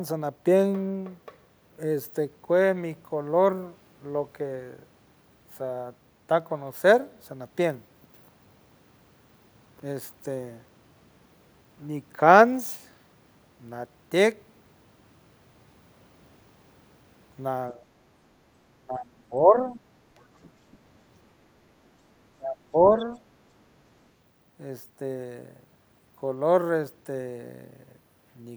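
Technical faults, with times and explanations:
17.72 to 17.80 s, speech suppressed in double talk: the voice dips by about 10 dB, likely an echo canceller ducking it while the far end talks.
18.82 to 19.78 s, speech suppressed in double talk: a deeper drop of about 20 dB over roughly 0.7 s, likely the canceller attenuating both talkers together.
20.43 to 20.50 s and 20.72 to 20.77 s, other side's voice leaking through: faint far-end scraps, around 30 to 35 dB below the speech, likely residual loudspeaker echo.
22.39 to 22.76 s, speech suppressed in double talk: the voice falls by about 20 dB for roughly 0.3 s, likely suppression during overlapping talk.
22.98 to 23.06 s, other side's voice leaking through: a brief far-end fragment about 25 dB below the speech, likely echo the canceller failed to remove.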